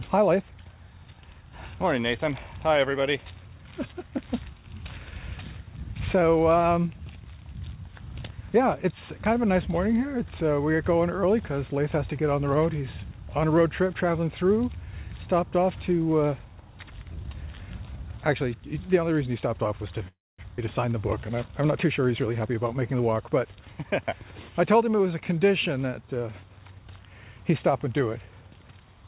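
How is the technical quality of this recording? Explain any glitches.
It's narrowband call audio with nothing above 4 kHz, which fits a G.711-style telephone codec, and there are three glitches clustered between 20 and 24 seconds.

From 20.08 to 20.40 s there's a call audio freeze. The last bit of sound hangs on as a fading buzz and then drops to silence for roughly 230 ms. That's likely packets stalling until the jitter buffer ran dry. When they arrived, playback resumed where it left off, so nothing's lost.

Right after, at 20.56 to 20.60 s, there's a skip ahead. A quick 13 ms join is all you hear, but about a fifth of a second of audio is gone. That stretch was dropped on the way or by the jitter buffer when it overflowed, while later audio was already waiting.

From 22.25 to 23.54 s there's a jitter buffer speed-up. The audio runs at about 110% speed with the pitch unchanged, so it sounds a bit hurried. 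The buffer was still over-full, so it snipped out tiny pitch-period slices, roughly 150 ms in total.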